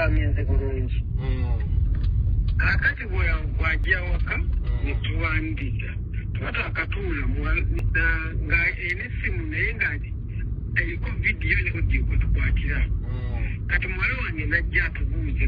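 The audio skips three times, at 3.84, 7.79 and 11.74 s, each a short jump forward where a small slice of sound, roughly a twentieth of a second, is gone and the two sides butt together with no gap. The steady spacing of about 4 s points to audio missing between chunks, likely from a recorder handing over between 4 s blocks. Unlike a dropout, nothing goes silent; the sound simply lurches ahead.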